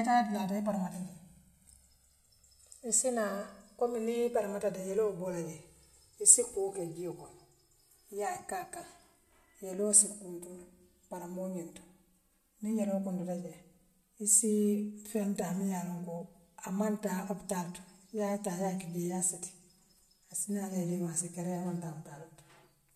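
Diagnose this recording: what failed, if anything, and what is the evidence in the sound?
The failure is at the converter stage. The two channels drifting apart come from two devices running on separate clocks. Throughout the speech, a slow flanging sweep colours the sound. The clocks disagree by roughly 200 parts per million, so the delay between channels grows steadily, reaching about 7 ms by the end. In mono, the channels sum into a comb filter. Its notches glide gradually through the spectrum as the offset widens.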